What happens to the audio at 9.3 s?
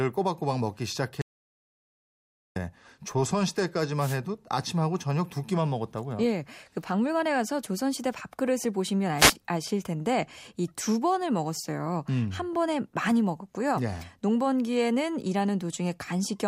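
The radio link from the analogue FM wireless microphone briefly faded, probably as reflected signals arrived out of phase and cancelled at the receiver, causing a wireless microphone noise hit from 9.17 to 9.34 s. With the carrier weakened, the receiver's own noise surged through. For just under two tenths of a second the speech is overlaid by a short swish of static before the signal recovers.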